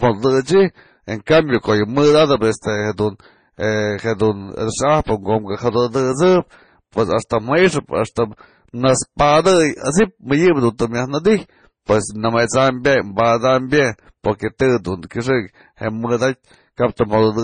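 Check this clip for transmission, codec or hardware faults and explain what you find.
One codec fault runs through the whole clip. Throughout, the speech has transcoding between lossy codecs: a low-rate MP3 likely re-encoded to Vorbis, stacking smeared, watery artefacts of both. The spectrogram shows nothing above 9.4 kHz.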